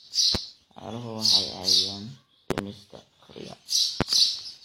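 Loud pops strike at 0.35–0.38 s, at 2.51–2.61 s as a quick double pop, and at 4.01–4.04 s. Each peaks about 20 dB above the speech, likely from voltage pulses from a switch, plug or static. Unlike a dropout, the speech continues unbroken beneath each thump.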